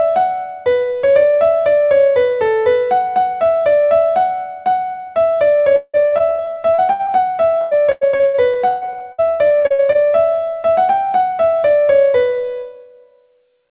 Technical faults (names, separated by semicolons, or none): repeated packet loss (robotic sound)